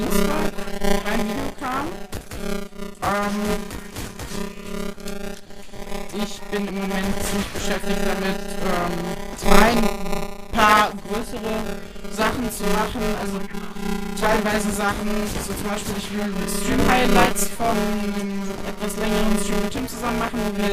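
Buffer tearing runs from start to end: the write and read positions in the ring buffer have slipped, so about a fifth of every 5 ms period replays audio roughly 20 ms old, hard-joined at both edges, giving a robotic 200 Hz buzz wherever signal is present.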